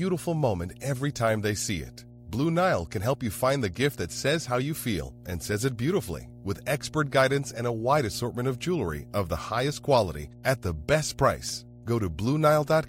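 Mains hum runs through the whole speech clip at 60 Hz, sitting roughly 20 dB below the speech. Power-line current, from a ground loop or a nearby transformer, has leaked into the signal path, leaving a steady low tone under every phrase and pause.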